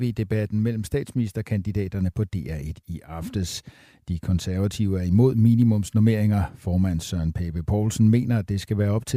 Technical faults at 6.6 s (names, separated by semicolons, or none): none